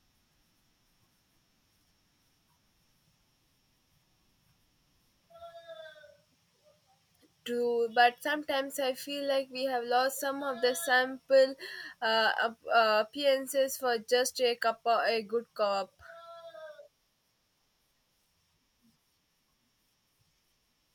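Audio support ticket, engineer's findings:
No technical faults found in the speech signal: level, continuity and frequency content stay consistent throughout, with no audible interruption or processing error.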